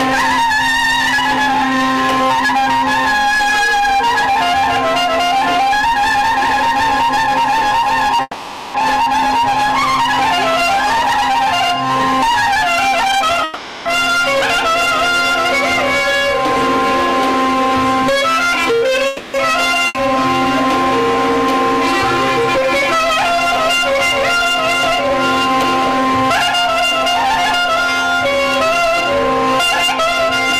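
At 8.21 s the audio stops advancing and the last sound is stretched into a fading buzz for about 0.53 s, finishing with a brief 20 ms silence before playback resumes at 8.76 s. This is a call audio freeze, likely caused by packets stalling in transit and the jitter buffer running dry. Nothing is lost: the receiver improvises a fill and then picks up exactly where it left off, so the whole stream ends up later by the fill length.

From 12.92 to 16.16 s a jitter buffer speed-up is running at about 113% speed, trimming roughly 0.4 s by repeatedly cutting out pitch-period-sized slices. The pitch holds steady while the pacing turns noticeably hurried. Inside that stretch, 13.44 to 13.88 s brings a second freeze of about 0.42 s, a decaying continuation with no silent part. A third freeze, about 0.27 s long, follows from 19.07 to 19.36 s.

At 19.88 s comes a skip ahead. Roughly 0.3 s of audio is discarded while later material is already queued, and a brief fill of about 70 ms bridges the join by 19.97 s. 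The two sides butt together almost directly, so the content jumps forward abruptly rather than pausing, and the accumulated delay shrinks.

A milder jitter buffer speed-up runs from 22.58 to 27.15 s at about 102%, removing well under a tenth of a second, so the acceleration is slight.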